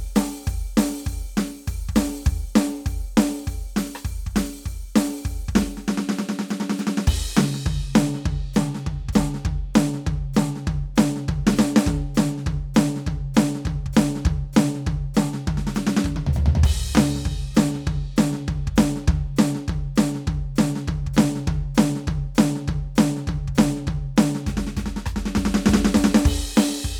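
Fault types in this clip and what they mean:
No fault types are present in this music clip.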